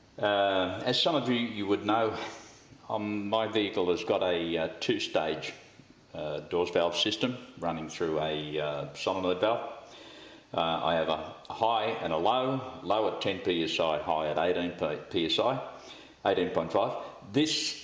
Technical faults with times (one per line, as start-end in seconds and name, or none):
none